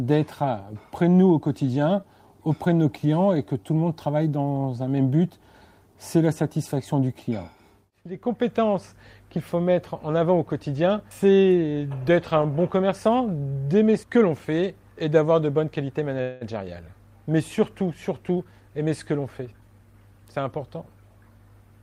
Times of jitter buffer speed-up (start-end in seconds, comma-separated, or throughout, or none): 18.29-19.94